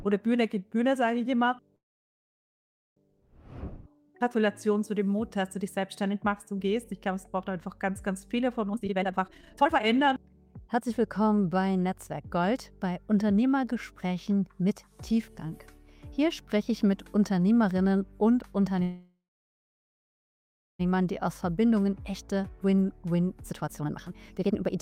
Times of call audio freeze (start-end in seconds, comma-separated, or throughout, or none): 1.75-2.98, 18.82-20.81